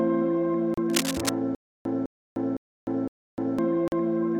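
At 0.74 s the sound drops to silence for 33 ms and resumes, a pattern consistent with a Bluetooth stall: the headphones' buffer likely ran dry while interfered packets were being resent, so playback paused until they arrived.

From 0.90 to 1.29 s, cable scratch noise rides over the audio as dense, irregular rustling, only a few decibels below the signal. The likely source is a worn cable, connector or control being moved, its contact resistance fluctuating rapidly.

Between 1.55 and 3.59 s comes a stutter with silent gaps. A 206 ms fragment plays, then 303 ms of digital silence follows, repeating every 509 ms, four times in all. The player or stream likely stalled, replaying the last fragment at each retry, and the intervening audio is lost.

A second Bluetooth stall at 3.88 s cuts the sound out for 42 ms before playback continues.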